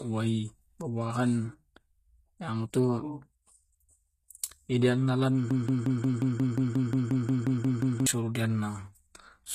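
From the start, the whole recording shows plainly audible codec damage, likely from HE-AAC compression at a rate that fits roughly 20 kbps. The treble is rebuilt from copied lower bands, so s sounds turn gritty and lispy. A spectrogram shows smeared, repeated-looking upper bands ending at 14.9 kHz.

From 5.51 to 8.07 s the sound falls into a broken-record loop. The same 178 ms fragment plays 14 times back to back, likely because the stream stalled and kept resending its last piece, and the audio meant for that span is lost. On a waveform, identical blocks tile evenly.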